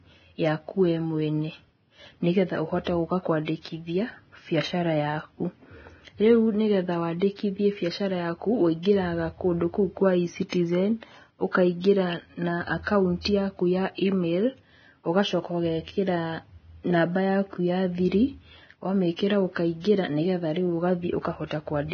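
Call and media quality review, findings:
Hissy, grainy speech throughout, treble roughened, attacks blurred. Spectrogram: hard ceiling at 6.5 kHz, speckled noise across upper bands. Likely Vorbis compression, heavy damage fitting a bitrate near 18 kbps. Coarse residue quantisation turns fine detail into noise.

Pre-echo at 8.83 s, 10.49 s and 12.83 s: short hiss ahead of sharp onsets, attacks softened. Spreads of 27, 35 and 39 ms. Waveform: low noise smear rising before each transient. Spectrogram: faint broadband wash just ahead of the onset edge. Transform codec spreads block quantisation noise back from a late-block attack into the quiet lead-in.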